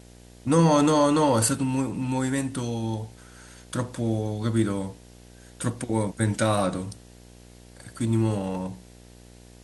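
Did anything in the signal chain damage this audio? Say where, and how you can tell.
Yes: video or display buzz runs throughout, a 60 Hz field-rate buzz with hash, well below the speech, from a display coupling into the analogue wiring.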